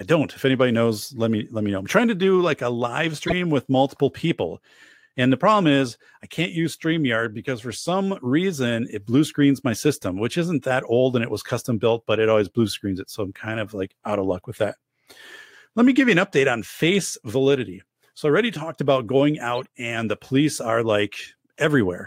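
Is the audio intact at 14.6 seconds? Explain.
Yes, at 14.6 seconds the speech plays through cleanly, with no dropout, click, distortion or other audible fault at that moment.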